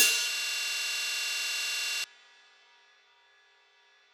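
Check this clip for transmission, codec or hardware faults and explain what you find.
A single fault stands out: a system hang loop from 0.35 to 2.04 s. The system froze while the audio hardware kept replaying its ring buffer, so one 46.44 ms chunk, which fits a 2048-sample buffer, repeats 36 times at 21.5 Hz and is heard as a rapid, rattling stutter.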